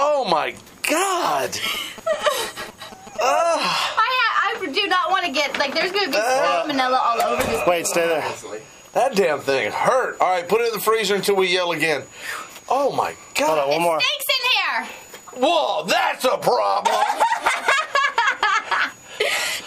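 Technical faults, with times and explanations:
1.66–3.18 s: GSM signalling bursts, a galloping train of ticks and 217 Hz buzz, roughly 15 dB down, from a nearby phone's radio pulses rectified by the audio circuitry.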